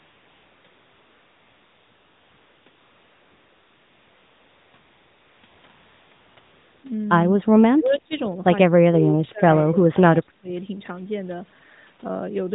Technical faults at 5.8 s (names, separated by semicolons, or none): AMR comfort noise